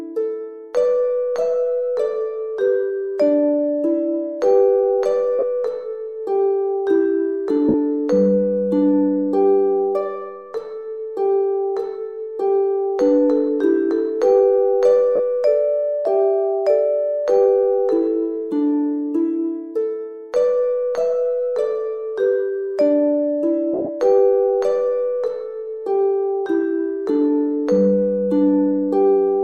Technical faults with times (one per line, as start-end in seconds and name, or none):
5.39-5.43 lost LE Audio frames
7.68-7.74 lost LE Audio frames
15.16-15.20 lost LE Audio frames
23.74-23.89 lost LE Audio frames